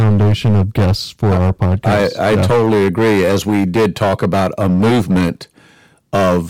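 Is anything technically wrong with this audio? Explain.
Yes. Hard clipping runs through the whole speech clip. The signal is driven about 14 dB past what the stage can pass. Roughly a fifth of samples hit the ceiling and are cut flat. The flat tops add high harmonics, so every loud syllable carries a harsh fuzz.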